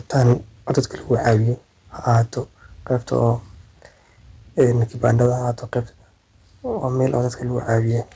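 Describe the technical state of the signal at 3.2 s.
At 3.2 s the loudest syllable takes on a harsh, crackling edge, heard from 3.13 to 3.27 s. The likely cause is microphone overload: the input level was set too high, so the peaks reached full scale at the converter and their tops were flattened. Only a small fraction of samples in that stretch are cut off, but the squared-off waveform adds distortion that sits on top of the band-limited call audio, which stops at 8 kHz.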